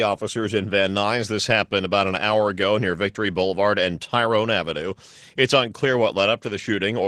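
Nothing in this bit of speech gives a listener anything to flag as a technical fault, so there's no problem to point to anywhere along its run.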